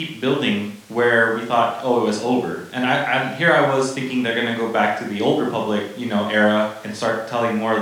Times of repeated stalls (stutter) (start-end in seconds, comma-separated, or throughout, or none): none